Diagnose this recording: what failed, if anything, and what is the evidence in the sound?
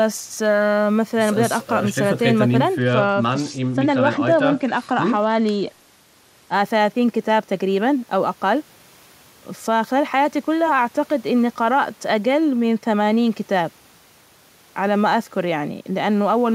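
The Bluetooth link's codec stage failed: an SBC bit pool drop from 2.77 to 6.53 s. Over that span the speech loses its treble and takes on a gritty, granular noise, then clears when the rate recovers. That fits the encoder falling from a bit pool near 31 to about 13, roughly 94 kbps, so the top sub-bands starve and the rest quantise coarsely. Unlike a plain low-pass, the dulling arrives with added grit, and unlike packet loss, nothing drops out.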